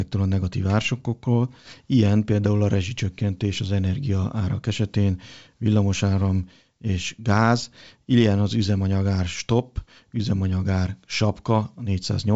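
No faults; the speech carries the sound of G.722 wideband telephone coding, with nothing above 7.7 kHz and a quiet lower band that fits the 64 kbit/s mode.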